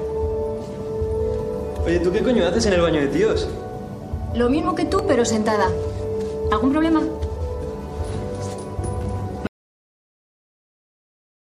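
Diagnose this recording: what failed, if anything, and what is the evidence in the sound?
The input feed was likely lost at the wiring or link stage: at 9.47 s an audio dropout to silence begins, leaving silence, no room tone, through the end.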